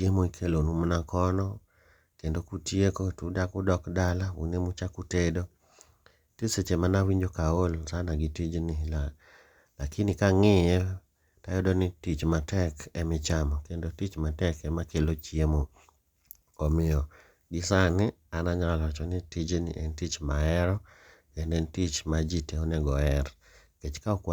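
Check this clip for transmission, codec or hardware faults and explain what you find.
Nothing wrong turns up here; the speech comes across without any transmission or hardware trouble to point to.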